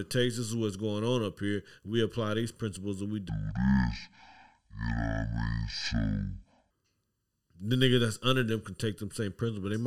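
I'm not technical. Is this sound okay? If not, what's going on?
No. The speech has two problems.

The first, heard throughout, is channel delay (comb filtering). One side of the recording arrives a fraction of a millisecond late, and when both sides are combined, some frequencies cancel at regular steps, starting around 700 Hz. That gives the voice a hollow, phasey tone. A simply muffled recording loses all its high end together. Here the dips are spaced evenly across the range.

The second is a section at the wrong speed, from 3.29 to 6.71 s, just after "these principles and we". That stretch plays at about half speed, so the voice drops roughly ten semitones and drags. Because pitch and tempo fall together, this is a playback-speed change rather than a pitch effect, which would keep the timing normal. The likely cause is an editor or player running that part on the wrong clock.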